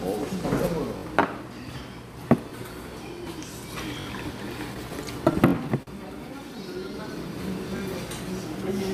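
A recording of everyday sounds, about 9 seconds long, with two related timing faults. Repeated buffer occurs at 0.98, 2.50, 4.01, 5.48 and 7.77 s. Each time a piece of about 21 ms, which fits a 1024-sample buffer, is played again because fresh audio was late: twice extra at most points, once at 2.50 s. The identical copies with hard joins make a brief buzzy stutter, and nothing is lost. Repeated stalls (stutter) run from 4.74 to 5.89 s. The jitter buffer emptied seven times there, and the receiver stretched the last sound to cover about 107 ms in total, roughly a tenth of that stretch. The longest wait was 45 ms. Unlike the exact buffer repeats, these fills continue and fade the sound rather than copying a block with hard edges, so the passage drags and hesitates without any missing audio.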